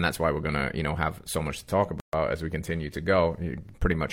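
At 2.00 s, right after "so much to talk", the speech drops out for about 132 ms and resumes at 2.13 s with "as we continue to". This is a gap at a join of encoded pieces: two separately encoded segments were butted together untrimmed, so the encoder's start-up delay and last-frame padding remain as silence. The waveform shows a flat stretch with slightly softened edges; the spectrogram shows a clean vertical band empty across all frequencies.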